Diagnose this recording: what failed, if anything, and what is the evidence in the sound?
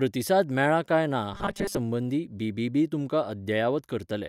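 From 1.34 s to 1.77 s the speech collapses into a rigid, metallic buzz at 200 Hz that still loosely tracks the words. This is robotic sound from repeated short buffers, likely at the driver or buffer stage. When new audio arrives too late, the last 5 ms is looped, so most of that stretch is repeats and the real signal is skipped. On a spectrogram, flat, evenly spaced harmonics at multiples of 200 Hz replace the natural pitch contour. The waveform shows identical 5 ms cycles.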